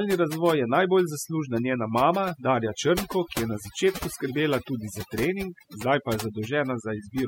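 Speech with overdone noise removal across the whole clip: over-aggressive spectral gating leaves a near-silent floor with twinkling artefacts.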